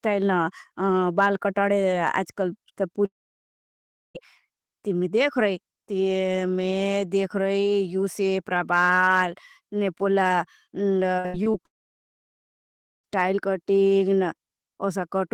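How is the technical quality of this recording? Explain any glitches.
The speech recording has three kinds of fault: brief overload, two long gaps, and one choppy stretch.

Hard clipping occurs at 2.05–2.18 s, 8.56–9.23 s and 13.19–13.22 s, overdriven by about 2 dB, 2 dB and 1 dB. The flattened peaks add harsh crackle, visible as squared waveform tops and high-frequency smearing on a spectrogram.

A long network dropout is the likely cause of the gaps at 3.05–4.17 s and 11.66–13.06 s, about 1.1 s and 1.4 s lost. A brief fading continuation gives way to near-silence, seen as blank spectrogram bands.

Repeated packet loss (robotic sound) runs from 11.17 to 11.56 s. Five patched holes, the longest 77 ms, cover 44% of the span and make it choppy, with a stuttering, striped spectrogram.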